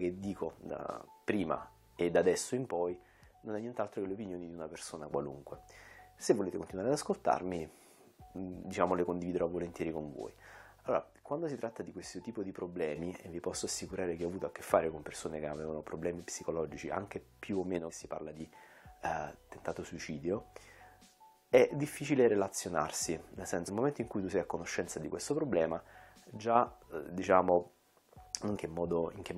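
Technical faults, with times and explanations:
2.71–5.11 s, 10.87–12.96 s, 17.79–18.40 s and 26.37–26.56 s, one channel drops out: the level falls abruptly by about 6 dB, likely from losing one stereo side before the mono sum.
17.89–17.91 s, 23.67–23.69 s and 28.55–28.57 s, damaged data in a compressed stream: short blips where the decoder misreads corrupted frames and loses sync before finding the next one.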